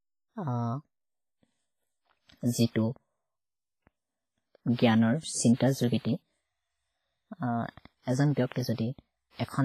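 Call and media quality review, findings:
WMA compression, likely cause, throughout the speech: transform coding with long blocks, starved of bits, fits roughly 24 kbps. Heavy damage, with quantisation noise smeared across tens of milliseconds, ringing and washy tails, hiss breathing with the signal, and nothing above 15.4 kHz.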